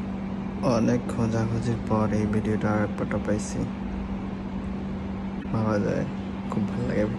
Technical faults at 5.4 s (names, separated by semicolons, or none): corrupt frame decoded